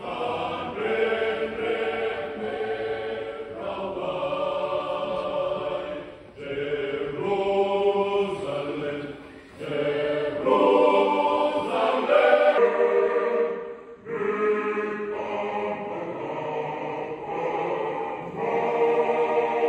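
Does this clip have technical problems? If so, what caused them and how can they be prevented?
Yes. From 12.58 s to the end at 19.68 s, a section at the wrong speed runs at 0.796× speed, dropping pitch roughly four semitones, likely from clock-rate mismatch. Prevent it by confirming matching sample rates before editing or playback.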